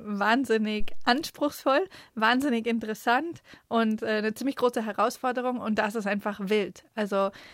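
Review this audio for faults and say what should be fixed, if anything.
A phantom power thump runs from 0.80 to 1.14 s: a deep knock peaking at about -18 dBFS, decaying in roughly 75 ms as a supply switching step reaches the input. A plosive pop carries breath noise, but this is a clean low-frequency pulse. Mute the channel before switching phantom power.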